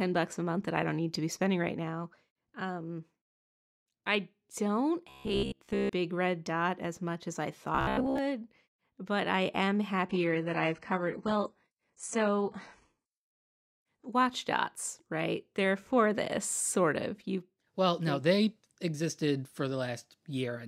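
At 5.10 s the speech turns robotic for about 0.8 s, until 5.91 s. It happens again from 7.75 to 8.18 s. Both stretches carry a rigid, metallic buzz at 66.7 Hz. The words stay roughly traceable underneath. The likely cause is robotic sound from repeated short buffers. New audio arrived too slowly, so a chunk of about 15 ms was looped. Most of the real audio in each stretch was skipped.

From 10.09 to 14.09 s the quality drops abruptly for four seconds, with no gap. Codec artefacts rise. This is an adaptive stream at a lower bitrate. The connection slowed, so playback switched to a much cheaper encoding. The sound points to a move from a clean AAC stream to a very low-rate HE-AAC one. Full quality returns at 14.09 s.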